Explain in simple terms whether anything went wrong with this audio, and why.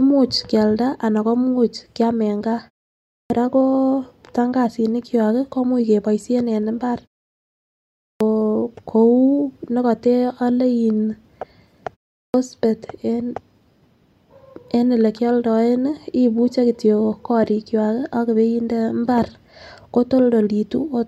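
Clipped start after a pause at 3.21, 8.1 and 12.24 seconds: each time speech resumes after silence, roughly its first tenth of a second is missing. The playback device dozes during quiet gaps and needs that long to wake, so opening sounds get cut.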